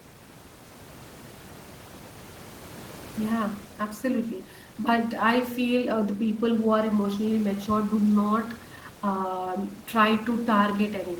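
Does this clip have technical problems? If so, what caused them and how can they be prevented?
No technical problems are audible; the room's background noise sits about 19 dB below the speech and belongs to the recording itself, so there is nothing to prevent.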